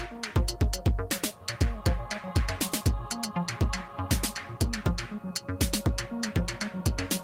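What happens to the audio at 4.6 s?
Nothing goes wrong at 4.6 s; the audio plays through that moment intact, with no dropout, click or other fault to be heard.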